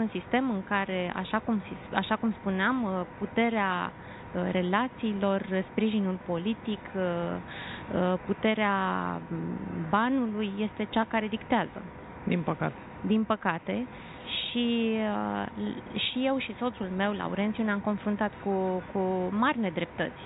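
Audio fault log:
Nothing stood out on listening.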